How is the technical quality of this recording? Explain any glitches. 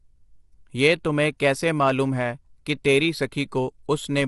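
The recording is clearly degraded by compression. Low-delay AAC compression runs throughout. Its short frames blur the pitch harmonics, so speech turns rough and grainy, with nothing above 11.6 kHz. This likely comes from a low bitrate around 32 kbps.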